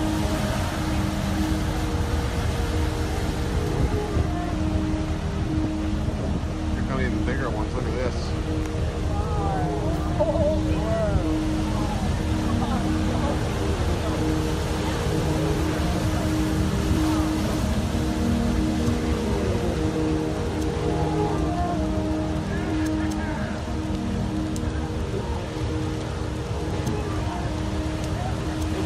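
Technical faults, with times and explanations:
No technical faults detected.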